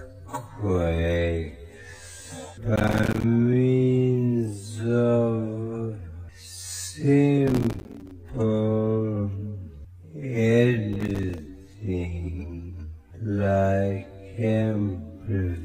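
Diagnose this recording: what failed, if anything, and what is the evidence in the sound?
Gritty crackle tears through the sound at 2.76 to 3.24 s, 7.48 to 8.11 s and 10.93 to 11.38 s, built from many tiny hard-edged silent gaps. This is processor overload crackle at the driver or buffer stage: repeated missed deadlines on buffers of roughly 5 ms, each dropping to silence.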